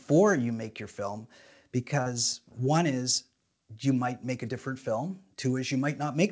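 Speech carried over a call path whose G.722 coding leaves nothing above 8 kHz, with one short concealed packet loss at 2.02 to 2.08 s, just before "one is you might". About 40 ms of audio never arrived, so the receiver stretched the preceding sound to cover it, giving a brief smear.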